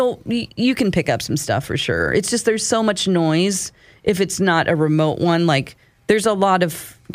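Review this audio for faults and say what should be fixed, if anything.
Nothing needs fixing: no technical faults can be heard anywhere in the signal.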